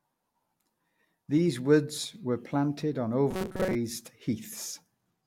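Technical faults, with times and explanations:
3.31 to 3.75 s, robotic sound from repeated short buffers. The speech turns into a stiff, metallic buzz that still loosely tracks the words. The buzz sits at 188 Hz, a period of about 5.3 ms. The likely cause is audio arriving too slowly, so the software loops a tiny fragment of recent sound to fill the gaps. For most of this span the sound is recycled rather than new. Each loop restarts at that fixed interval, imposing one flat pitch.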